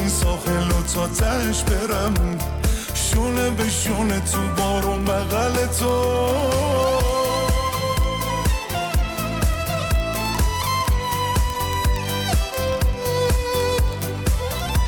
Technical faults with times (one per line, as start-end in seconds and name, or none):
0.11-14.87 word clock ticks